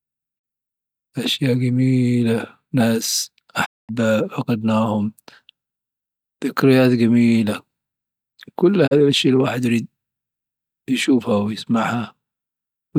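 A speech recording with three digital broadcast dropouts. The audio fades to silence over about 20 ms and returns after a short gap. The first hole sits at 0.38 to 0.45 s. The longest runs from 3.64 to 3.91 s, just after "أشياء جميلة ناس", with 224 ms missing. The last is at 8.86 to 8.93 s, right before "أشيا الواحد يريد". The two short gaps each lose 32 ms, which fits a single failed frame. In each case the receiver muted until valid frames arrived, and that sound is gone.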